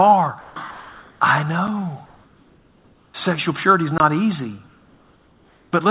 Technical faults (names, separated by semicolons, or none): sound dropped by the voice detector; block of digital silence; comfort noise in place of the background